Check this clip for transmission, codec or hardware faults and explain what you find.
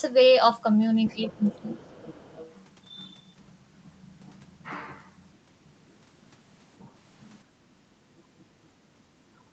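The clip has echo-canceller faults in two places: near the start, where leakage and suppression overlap, and near the end.

Other side's voice leaking through, from 1.07 to 1.59 s and again from 1.76 to 2.52 s: a faint second voice sits about 25 dB below the main speech. The likely cause is that the far end was playing on a loudspeaker and the echo canceller left a residue of it in the microphone signal. It comes through as low-level scraps behind the talker.

Speech suppressed in double talk, at 1.14 to 1.43 s, 1.61 to 1.71 s and 9.35 to 9.47 s: the talker's level drops by roughly 15 dB, 10 dB and 20 dB, for about a fifth of a second, a tenth and a tenth respectively. This is likely because both sides were talking at once and the canceller could not separate its own talker from the echo, so it attenuated everything. The speech briefly dips.

Background gated by the echo canceller, at 7.65 to 7.99 s, 8.23 to 8.34 s and 8.55 to 8.74 s: the room sound falls by about 9, 9 and 8 dB. 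Each dip lasts roughly a third, a tenth and a sixth of a second. The canceller clamped the microphone while the loudspeaker was active, so the ambience ducks and then returns when it releases.

The call microphone processing, which leaves nothing above 8 kHz, is normal behaviour and not a fault.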